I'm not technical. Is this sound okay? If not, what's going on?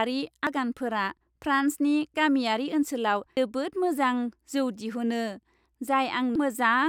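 No. There are three very short glitches, at 0.47, 3.37 and 6.36 seconds. Each one is a quick chirp or blip cutting into the speech. The cause is damaged data in a compressed stream. Some of the stored or sent audio data was spoiled. When the player hits a bad spot, it can't read it properly. It briefly loses its place and hunts for the next good piece, which makes the blip.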